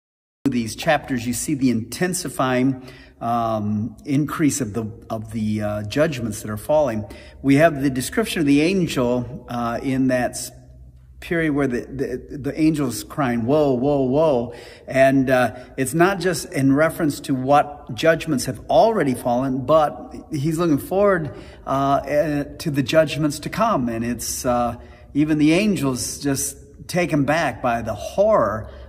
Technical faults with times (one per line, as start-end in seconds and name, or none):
0.00-0.46 cut-off start